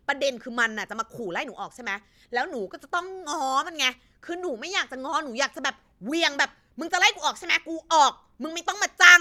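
A speech recording with no technical fault to report. Nothing in the audio calls for a time, a cause or a correction.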